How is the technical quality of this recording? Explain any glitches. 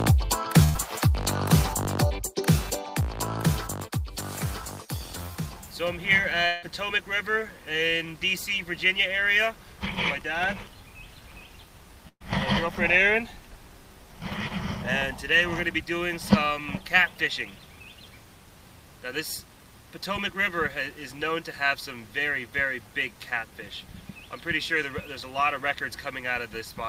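The recording has three network glitches: two bursts of packet loss and one longer gap that points to a network dropout.

At 0.63 to 0.77 s and again at 12.08 to 12.22 s, there is a burst of packet loss. A run of packets never reached the receiver in time, so roughly 120 ms of sound is missing each time. The receiver extended the last sound it had and faded it, giving a held buzz or a fading hiss before the audio resumes further on. The second burst fades into about 50 ms of silence before recovery.

At 6.47 to 6.64 s, a stretch of about 160 ms is replaced by a continuation of the preceding sound that thins out over roughly 160 ms. The audio then picks up again with that section gone. The likely cause is a long network dropout, during which nothing arrived and the receiver could only stretch what it last heard.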